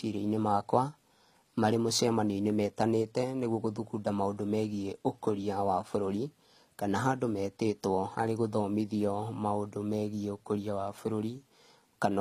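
Transcoding between lossy codecs runs throughout the speech, from start to finish. Nothing sounds above 14.9 kHz, and the different artefacts of both codecs are heard together. This is likely an MP3 encode at around 57 kbit/s re-encoded as HE-AAC at 24 kbit/s. The second encoder wastes its small budget reproducing the first one's artefacts while adding its own.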